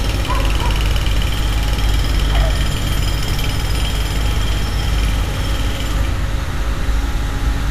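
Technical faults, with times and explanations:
No technical faults are heard in this recording.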